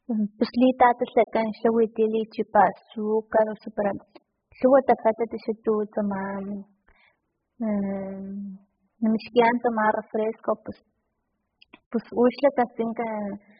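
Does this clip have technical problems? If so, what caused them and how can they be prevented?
Yes. Throughout, the speech is dull and smeared, with nothing above 5.1 kHz. This is likely heavy AAC compression at a very low bitrate, which would fit about 8 kbps. Encode at a higher AAC bitrate to prevent it.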